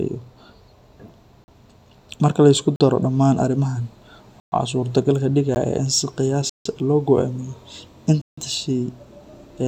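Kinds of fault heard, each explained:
Block of digital silence: parts of the speech drop to silence and return with no fade. The 14 ms gap near 5.55 s is heard as a tick. The 40 ms gaps are brief holes. The 120 and 160 ms ones are short holes.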